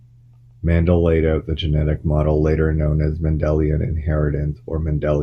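No dropout, distortion, timing or level fault can be heard anywhere in the recording.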